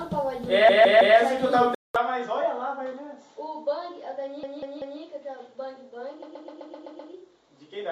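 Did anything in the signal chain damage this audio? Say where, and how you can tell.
Yes. At the codec or storage stage, repeated frames cause stutters. From 0.69 to 1.17 s a 160 ms block plays three extra times, from 4.43 to 5.01 s a 192 ms block repeats three times, and from 6.22 to 7.12 s a 128 ms block repeats seven times. Together these add about 1.95 s. A spectrogram shows identical tiles side by side, with vertical seams at the joins.

At 1.75 s there is a 200 ms silence. After it, the sound turns duller and drops about 5 dB, and a new noise floor sits about 45 dB below the signal. A spectrogram shows a hard ceiling at 7.6 kHz from then to the end. This is likely an input switched to a poorer device.

During playback, a CD skip at 1.96 s produces a tick. On the waveform it appears as a mute of a few milliseconds, after which the sound resumes from a different point. The discontinuity shows as a narrow vertical line on the spectrogram.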